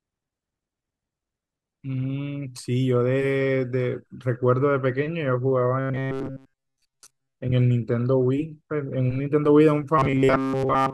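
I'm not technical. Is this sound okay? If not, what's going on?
No. From 5.80 to 7.34 s, and again from 9.98 s to the end, the speech turns into a stiff, metallic buzz: robotic sound from repeated short buffers. The likely cause is that new audio arrived too slowly, so the player kept repeating a tiny slice of about 7.5 ms, skipping most of the real speech. That loop forces a steady 134 Hz hum. Unlike a dropout, the sound never goes silent; it keeps roughly following the speech.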